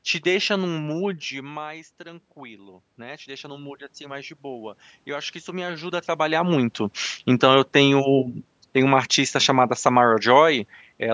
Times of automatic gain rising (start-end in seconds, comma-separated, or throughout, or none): 0.79-6.47